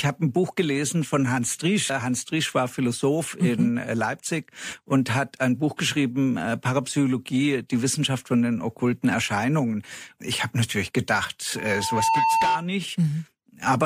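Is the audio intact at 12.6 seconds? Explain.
No. At 12.6 seconds the speech is joined by a loudspeaker feedback squeal, a steady tone at 900 Hz that runs from 11.56 to 12.66 s. It swells over roughly half a second and settles a few decibels above the speech. The microphone was picking up the loudspeaker it was feeding, and at 900 Hz the loop's gain exceeded one, so that frequency kept reinforcing itself until the amplifier limited it or the loop was broken.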